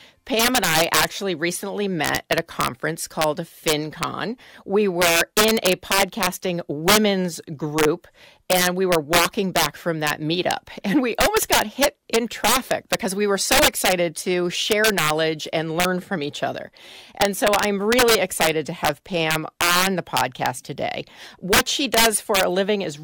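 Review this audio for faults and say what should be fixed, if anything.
Integer overflow runs throughout the speech: the signal is driven about 8 dB past full scale, and the roughly one percent of samples that exceed the limit wrap to the opposite sign instead of being held, producing violent cracks on loud syllables, far harsher than clipping. To prevent it, use saturating arithmetic or a limiter before conversion to integer, and leave enough headroom in the gain stage.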